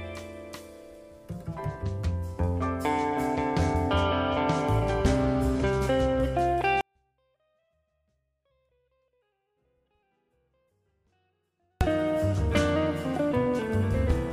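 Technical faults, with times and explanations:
6.81 to 11.81 s, 24-bit alignment error (too quiet): the sound stays clean but drops by about 48 dB all at once and is barely audible for five seconds. The samples sit in the low 24 bits of each 32-bit word, but the playback side reads them as full 32-bit integers. The top byte is then empty, so every value is 256 times too small. Level returns at 11.81 s.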